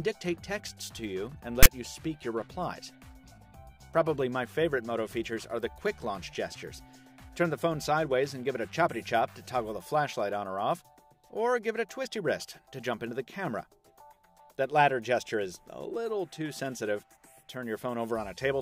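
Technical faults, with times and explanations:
1.63 to 1.66 s, file tags played as audio: a short, loud rasp cuts in with hard edges and lasts about 30 ms. Its waveform sits off to one side rather than centred. The player has read a block of text tags as if they were samples. Character bytes fall in a narrow, mostly positive range. So the waveform carries a large offset and a coarse buzz, and it starts and stops abruptly where the tag block begins and ends.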